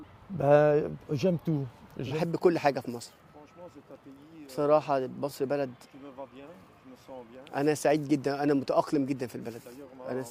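Small, unevenly spaced hiccups and a faintly unsteady tempo run through the sound, pointing to clock drift between sender and receiver, with the sender's clock about 3% slow. From 0.12 s to 10.30 s, repeated timing corrections stretch playback to 97% speed, as the receiver repeats short pieces and adds roughly 0.3 s overall.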